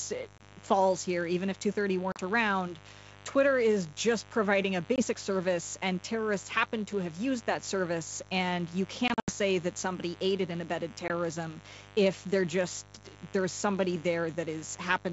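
Speech over a wideband call, and there's a steady, raspy mains buzz under everything, sitting roughly 20 dB below the speech. It's built on 50 Hz, but what you hear is the sharp switching spikes from something like a dimmer or rectifier, or a missing shield, firing twice per cycle, so the harmonics stretch up into the kilohertz range and it rasps rather than hums. On top of that there's packet loss on an ADPCM call. You get hard-edged silent holes at 0.38–0.41 s, 2.12–2.20 s, 4.96–5.02 s and 11.08–11.11 s, mostly 20 ms gaps, which fits one lost packet each, with 40 ms at 2.12 s. There's also a scattered cluster from 9.08 to 9.31 s, with about 140 ms missing in total and the longest run around 80 ms. After each hole the decoder's predictor and step size have drifted from the sender's, so the speech comes back slightly distorted, then settles within a few tens of milliseconds. The G.722 coding itself sounds like full rate, clear up to 7 kHz with only a faint hiss in the top band.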